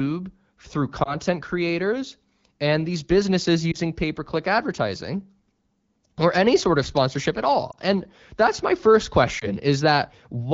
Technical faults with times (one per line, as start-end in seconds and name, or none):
1.03-1.15 lost AMR speech frames
3.72-3.77 lost AMR speech frames
7.71-7.75 lost AMR speech frames
9.39-9.46 lost AMR speech frames